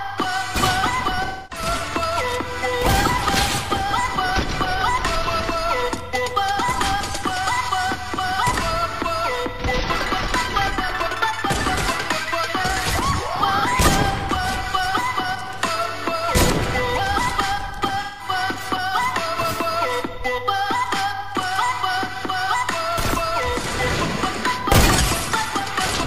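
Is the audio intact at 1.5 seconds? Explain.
No. From about 1.25 to 1.66 s there's AAC frame loss with concealment. Roughly 256 ms of coded data went missing, which fits a run of about six frames, and the decoder papered over the hole by rebuilding sound from the last good spectrum it had, with randomised signs or interpolated energy. So at 1.5 s you're hearing an invented patch instead of the real signal, and it comes across as smeared, noisy or phasey.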